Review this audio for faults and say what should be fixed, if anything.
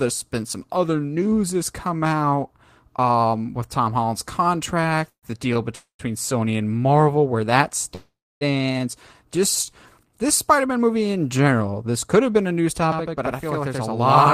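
Call audio freezes occur at 5.09–5.32 s, 5.75–6.01 s and 7.95–8.43 s, the last just after "where that". Each time the sound is held as a fading buzz, then drops to silence for about 90 ms, 110 ms and 280 ms. Playback resumes where it stopped, having fallen behind by 133 ms, 239 ms and 459 ms. The likely cause is packets delayed in transit, leaving the jitter buffer empty. Prevention: give the call priority on the network and allow the jitter buffer to grow adaptively under bursty delay.

A short stall from a late packet occurs at 5.54–5.57 s. The receiver stretches the current sound by 17 ms until the packet arrives, giving a brief held tone with a slight buzz before the audio continues from the same point. Nothing is lost, but timing slips slightly. Prevention: run a slightly deeper jitter buffer so single late packets arrive before playback needs them.

A channel delay (doubling) starts at 12.92 s, right after "have been a news", and runs to the end. 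One channel lags the other by 85.33 ms, which fits a 4096-sample buffer. Summed to mono, it produces an equal-level slap echo. Prevention: align the channel buffers before the mono downmix so both paths carry identical latency.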